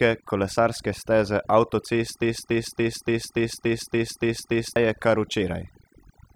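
From the start, the speech carries overdone noise removal. The reducer was set far too aggressively, so frequency bands sitting near its noise estimate are pulled down hard or gated off entirely, and the softer components of the voice are removed along with them. The background collapses to near silence broken by small chirping, twinkling artefacts, while the voice itself has its quieter detail hollowed out. This persists through the whole clip.

At 2.22 s a broken-record loop begins and runs to 4.76 s. A 287 ms fragment plays back identically nine times in a row, giving a rhythmic stutter at roughly three and a half repeats per second. The likely cause is a stall in the player, encoder or stream, which kept resending its last buffered piece instead of new material, so whatever speech belonged in those two and a half seconds is missing.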